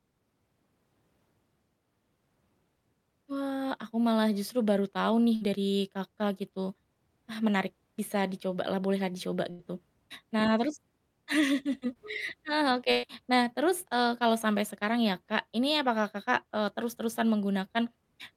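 At 5.35 to 5.43 s and again at 9.51 to 9.61 s, a burst of packet loss removes about 60 ms and then 80 ms of speech. The receiver stretches the last sound, fading as the gap goes on, seen as a flat, dimming continuation before the waveform jumps ahead. At 11.93 to 11.97 s, a short concealed packet loss drops about 20 ms. The decoder synthesises a brief continuation and blends back, heard as a quick smear, with a slight blur in the spectrogram's detail. At 12.91 to 13.05 s, the longest burst removes about 120 ms, held and decaying rather than falling silent.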